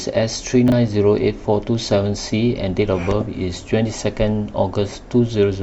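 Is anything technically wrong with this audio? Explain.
Yes. From 0.68 to 0.72 s the speech jumbles briefly: chunks out of order, as one 20 ms chunk arrived a chunk late, creating three hard joins.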